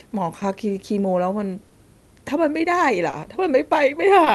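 Clock drift between sender and receiver runs through the whole clip. The sender's clock runs about 2 percent slow, so the receiver's buffer keeps draining and must pad the gaps, producing small, unevenly spaced timing hiccups over the call path's band-limited, roughly 12 kHz Opus sound.

Short stalls from a late packet occur at 0.39, 1.67, 3.10 and 4.24 s. Each time a packet missed its slot, the buffer ran empty and the receiver held the last sound for 20 ms, or 30 ms at 1.67 s, before resuming. Nothing is lost, but a sound briefly hangs with a slight buzz or dip.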